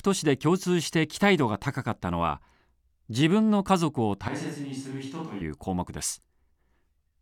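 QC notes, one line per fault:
4.28–5.41 s: switch to a distant microphone. The speech abruptly turns roomy and hollow with thinner bass, falls by around 10 dB, and room noise comes up to roughly 30 dB below the speech, likely because the close microphone dropped out and a far one took over before the abrupt return.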